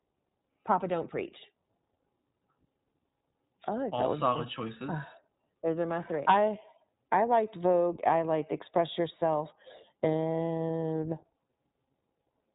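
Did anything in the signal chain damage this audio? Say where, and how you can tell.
Yes, at the codec stage, and throughout the speech. Nothing passes above 3.8 kHz, and the voice has a plainly rough, synthetic grain. That points to the iLBC codec, likely in its 15.2 kbps mode with 20 ms frames, each coded independently. A simple low-pass filter would dull the sound without adding that texture.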